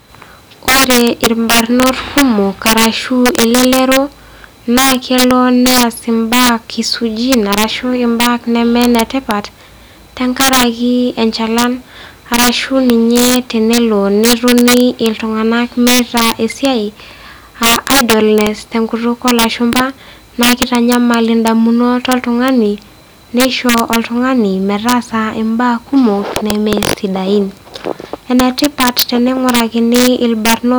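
Integer overflow runs throughout the speech: peaks driven about 7 dB past the limit, under one percent of samples, wrap to the opposite sign, giving violent cracks far sharper than clipping's flattened buzz. At 19.73 to 19.83 s, between "idleness te enkutuk" and "naa keitanyamal indamunot oltung'ani", a loud pop sounds twice, about 10 dB above the speech, likely a switching or static pulse, riding over the uninterrupted sound.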